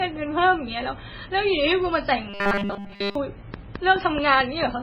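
Across the whole clip the speech carries heavy MP3 compression damage, most likely from encoding at a very low bitrate; the sound points to something around 16 kbps. With so few bits available, weak frequency lines drop in and out from frame to frame, which gives the speech a watery, swirling texture and blurs the onsets of syllables.

From 2.30 to 3.15 s the speech turns into robotic sound from repeated short buffers. Throughout that span the output is essentially all repeated material. The likely cause is new audio arriving too slowly, with the playback side looping the most recent short chunk to fill the gap while the real signal is skipped. The repetition imposes a steady 200 Hz buzz, which fits a 5 ms buffer. The result is a rigid, metallic drone that only loosely follows the shape of the speech.

Between 3.54 and 4.64 s a train of clicks sits over the audio: about seven sharp ticks of near-identical shape, regularly spaced at 4.59 per second. 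Each one peaks roughly 10 dB above the speech. A likely source is interference from nearby equipment or a faulty connection injecting periodic pulses, heard as an even, mechanical ticking layered over the sound.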